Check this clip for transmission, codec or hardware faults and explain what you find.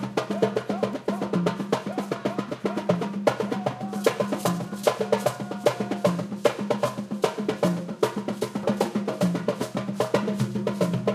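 No transmission, codec or hardware faults can be heard anywhere in these sounds. Nothing in the audio calls for a correction or further explanation.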